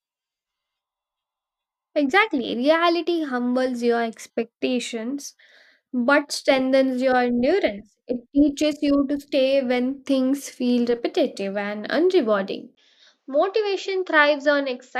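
Input switched to a poorer device at 12.75 s, after "feel repetitive and unrewarding", likely to another microphone: a 20 ms gap, then quieter speech with nothing above 7.6 kHz.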